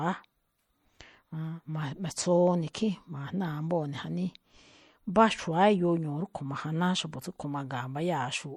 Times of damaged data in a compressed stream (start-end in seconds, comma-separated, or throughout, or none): none